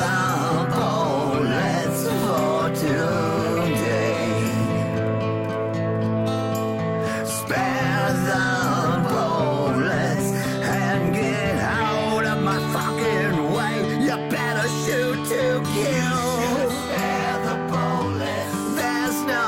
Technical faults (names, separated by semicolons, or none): none